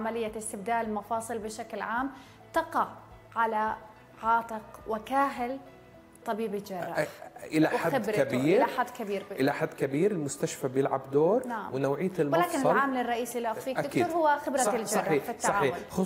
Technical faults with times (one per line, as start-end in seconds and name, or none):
none